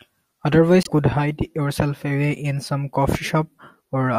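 At 0.83 s the speech jumps ahead, and for about 60 ms, up to 0.89 s, what comes out is garbled. That's most likely a broken MP3 bit reservoir. A few frames went missing, so the next frame reached back for borrowed bits and decoded bytes that belonged to a different frame. The damage spans roughly two or three frames, which fits frames of about 24 ms.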